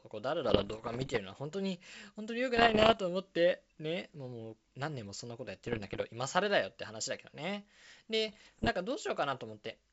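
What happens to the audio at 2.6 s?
From 2.56 s to 2.99 s the speech is hit by bit errors on an ADPCM link, at a rate in the region of one or two percent. Because the G.722 stream encodes differences, each flipped bit also corrupts the decoder's step size and predictor state, so the error smears on for several milliseconds rather than staying a single sample. The result is a cluster of pops and rough, gritty bursts with brief jumps in level.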